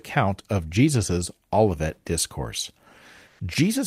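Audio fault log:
3.27 to 3.39 s, comfort noise in place of the background: for about 120 ms the real room tone, sitting roughly 37 dB below the loudest speech, drops out and a flat, featureless hiss takes its place, about 4 dB quieter than what was there. The likely cause is discontinuous transmission, possibly Opus DTX, where the sender goes quiet once the voice detector hears no speech and the receiver fills the gap with synthetic noise shaped roughly like the background.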